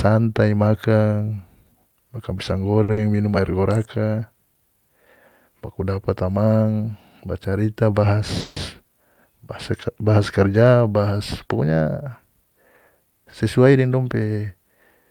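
A short stall from a late packet at 2.83 to 2.90 s holds the last speech sound for about 50 ms while the jitter buffer waits, then resumes without loss. A burst of packet loss follows at 2.92 to 2.99 s: about 50 ms is filled with a fading continuation, and about 60 ms of speech is skipped. A call audio freeze at 8.40 to 8.58 s stretches the preceding sound into a 160 ms buzz or hiss that fades without reaching silence, and the speech then carries on with nothing lost. The likely cause is packets held up in transit that emptied the buffer. A jitter buffer speed-up from 12.90 to 14.28 s plays speech at about 109% of normal speed, at unchanged pitch, by cutting repeated pitch-period slices totalling around 150 ms, so that stretch sounds hurried.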